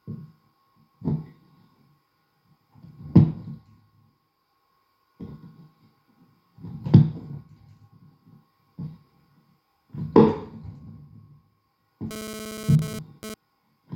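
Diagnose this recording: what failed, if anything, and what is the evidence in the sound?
GSM phone buzz got into the analogue wiring: a nearby 2G handset's radio bursts were rectified by the audio circuitry. From 12.11 to 13.34 s a hard, raspy buzz at 217 Hz with dense harmonics sits about 12 dB below the signal, appearing only briefly, as a data transfer does.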